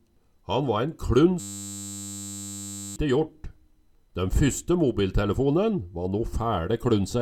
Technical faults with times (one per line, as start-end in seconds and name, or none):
1.40-2.96 system hang loop